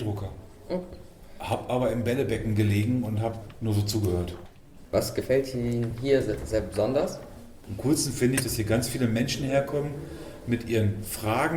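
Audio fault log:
5.90–5.95 s, 7.00–7.06 s, 8.37–8.43 s: corrupt frame decoded. Three brief bursts, each about 50 ms, growing louder (peaks around -25, -15, then -10 dBFS). Damaged compressed frames were played anyway, so misread gains and codes scattered energy into the wrong frequencies.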